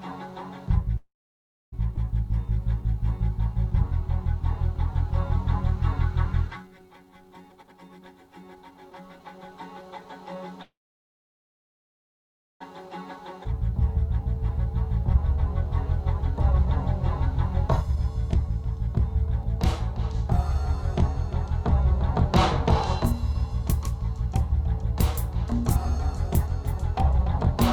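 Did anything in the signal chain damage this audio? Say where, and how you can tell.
Yes, the damage comes from the network and jitter buffer stage of a call path.

Call audio freeze: from 0.97 to 1.74 s and from 10.62 to 12.62 s the sound stalls. A brief continuation of the last sound fades into about 0.63 s and 1.88 s of silence, after which playback resumes exactly where it left off. This is likely a packet delay that drained the buffer. Unlike a skip, nothing is lost.

Skip ahead: at 1.96 to 1.99 s and 13.44 to 13.47 s, playback jumps forward with almost no gap, dropping roughly half a second and then roughly a second of audio. The cut edges are joined almost directly, with only a few milliseconds of fill rather than the long silence a freeze would leave.

Jitter buffer slow-down: from 2.25 to 7.43 s the audio runs at 95% speed with unchanged pitch, stretched by 260 ms of repeated pitch periods to rebuild the reserve. 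Because the pitch stays put, this is not a clock or sample-rate error.

Jitter buffer speed-up: the audio runs at 117% from 7.48 to 10.36 s, 105% from 12.86 to 19.28 s and 104% from 22.58 to 27.34 s, again with pitch held. Short pitch periods are removed to shed excess delay, which differs from a skip's single abrupt jump.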